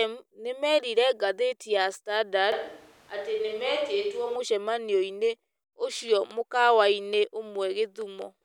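From 2.52 to 4.36 s the voice abruptly turns roomy and hollow, loses bass, drops by roughly 5 dB and gains background noise around 30 dB below the speech, then snaps back. This is likely a switch to a distant microphone, with the close microphone's signal missing.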